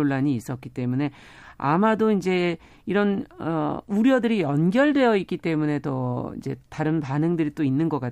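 No technical faults are audible.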